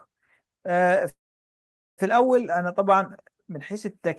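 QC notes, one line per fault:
1.09–2.01 s, call audio freeze: the sound stalls and its last moment is stretched into a brief fading buzz that drops to silence for about 0.83 s, roughly 0.88 s of inserted fill in all. The likely cause is a jitter buffer running dry while packets were held up. Unlike a dropout, nothing is cut: the audio resumes exactly where it halted, just about 0.88 s late for the rest of the clip.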